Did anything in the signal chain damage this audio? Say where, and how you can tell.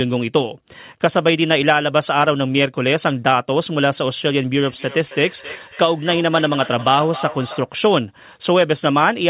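Yes: feedback echo between two devices, 4.63 to 7.7 s. A second device's playback re-enters the microphone, returning speech roughly every third of a second, about 15 dB down.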